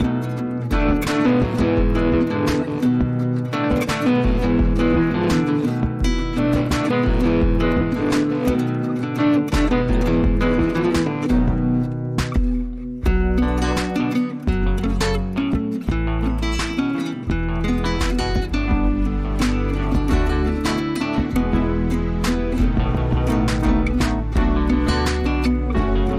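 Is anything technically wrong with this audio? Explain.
No, nothing technically wrong can be heard in this audio. No fault turns up anywhere in it that would call for an explanation.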